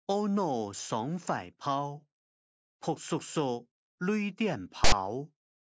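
A short audio clip with one fault: file tags played as audio, from 4.84 to 4.92 s. For about 80 ms the decoder treats a block of text metadata as sample data, so the character bytes come out as a loud, harsh rasp sitting off-centre rather than centred on zero. The burst starts and stops abruptly with hard edges, heard as a sudden stab of static near the end of the clip.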